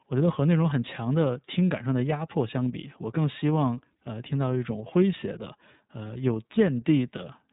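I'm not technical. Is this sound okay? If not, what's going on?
No, the whole clip passes through the iLBC codec, a phone-call speech compressor. It chops the speech into 30 ms slices and rebuilds each one separately, so the voice sounds rough and synthetic, and everything above 3.8 kHz is missing, leaving it thin and muffled.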